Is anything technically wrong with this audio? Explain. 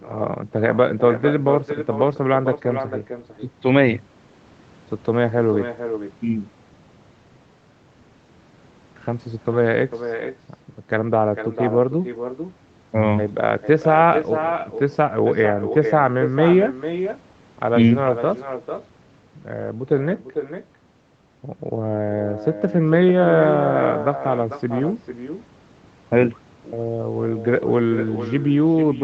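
Yes. Echo with no canceller runs throughout this speech: the far end's loudspeaker feeds its microphone unchecked, so each phrase returns about half a second later, roughly 8 dB quieter and thinner.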